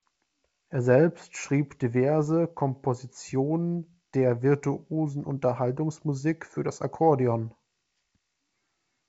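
Nothing here counts as a fault: the speech sounds like ordinary G.722 wideband telephone audio at 64 kbit/s, with nothing above about 7.7 kHz and at most a faint trace of the coding.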